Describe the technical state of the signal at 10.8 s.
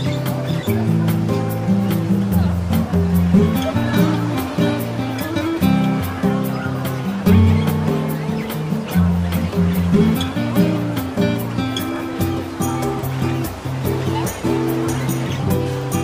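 Clock drift buffer slips from 0.5 to 15.4 s, including 10.8 s: two clocks, likely about 300 ppm apart, drop or repeat about 15 samples, clicking every 1.15 s.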